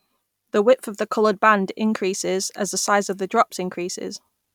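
No dropouts, clipping, glitches or other faults can be heard at any point in the recording.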